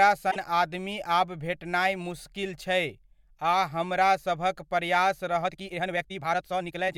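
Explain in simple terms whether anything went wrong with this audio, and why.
Two things go wrong in this speech.

At 0.30 to 0.37 s, just before "आदमी आब भेटनाय मुस्किल", there is a split-second glitch: a tiny chirp or hole, and the sound seems to skip forward. This is a broken MP3 bit reservoir, and the likely cause is that a few MP3 frames, each about 24 ms long, were cut out. The next frame then reaches back for data it had borrowed from earlier frames and finds the wrong bytes.

From 5.40 s to the end, right after "हमरा सभक प्रयास", the speech suddenly rushes along at nearly twice its normal pace, about 1.88 times as fast. It sounds hurried, but the pitch does not rise. This is a time-stretched section, likely squeezed by software to fit a shorter length. The software kept the pitch steady by dropping short slices of the audio.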